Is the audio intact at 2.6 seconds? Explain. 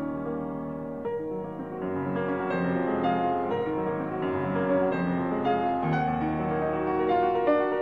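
Yes, at 2.6 seconds the audio plays through without any dropout, click, distortion or other fault.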